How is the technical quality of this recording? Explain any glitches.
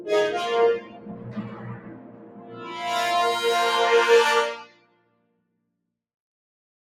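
The technical quality is compromised by a speech-oriented noise suppressor left running on material that isn't speech.

Throughout, the noise suppressor applied to music or sounds keeps misreading sustained content and ambience as noise. Onsets punch through, but anything held or decaying gets pulled down, with gain swinging by something like 20 dB. The result is a pumping, fluttery character, with tails that thin out instead of ringing naturally.

Sound is also cut by the noise suppressor at two points: from 0.8 to 2.68 s, and again from 4.65 to 5.43 s. The first affects roughly one and a half seconds in total, the second a bit under a second. In both, the suppressor decides the steady or fading part is noise and clamps it, dropping it by about 10 dB at worst, so those passages sink and their decays get chopped short.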